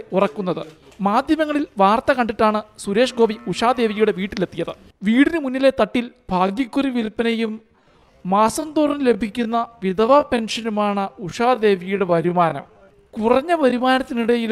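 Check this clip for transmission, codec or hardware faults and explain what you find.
One fault is present: a time-stretched section from 5.99 s to 14.52 s. Here the pace abruptly slows to about 0.69 times normal while pitch holds steady, likely because software lengthened the audio by repeating short fragments, so the section drags.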